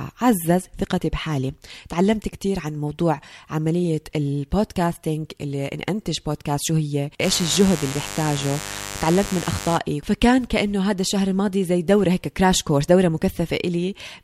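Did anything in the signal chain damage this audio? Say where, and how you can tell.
Yes. From 7.21 to 9.80 s a steady, raspy mains buzz sits under the speech, loud enough to be only around 10 dB below it. Its 50 Hz-based hum with a bright edge extending well up into the kilohertz range points to the analogue wiring stage. A dimmer, a rectifier or a poorly shielded cable is injecting sharp switching spikes twice per mains cycle, and those spikes carry a long series of harmonics.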